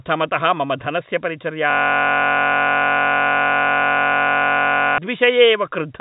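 At 1.70 s the system hangs: the computer or its audio driver stops delivering new data, and the sound hardware keeps replaying the last 21.33 ms of its ring buffer, which fits a 1024-sample buffer. Until 4.98 s, that sliver of speech repeats well over a hundred times, so the audio becomes a steady buzz at about 46.9 Hz, carried in the same narrow telephone band below 4 kHz that G.711 coding gives the whole clip.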